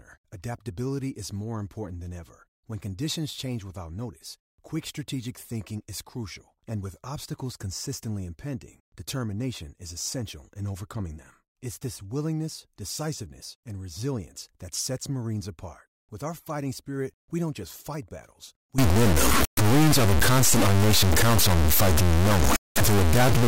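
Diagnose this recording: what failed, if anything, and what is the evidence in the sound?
From 18.78 s to the end at 23.48 s, just after "don't just fight battles", the sound turns harsh and buzzy. The gaps between phrases fill with noise instead of falling silent. That points to a stuck bit, likely from a faulty converter or a broken data line. One bit stays fixed, so about half the samples land off by its weight. The error follows the waveform's sign and size. Each step sits around -15 dBFS, which makes the buzz loud.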